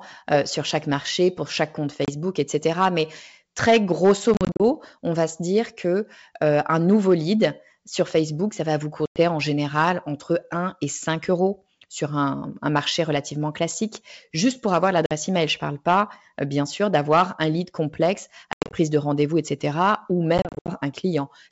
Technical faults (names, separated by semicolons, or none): packet loss on an ADPCM call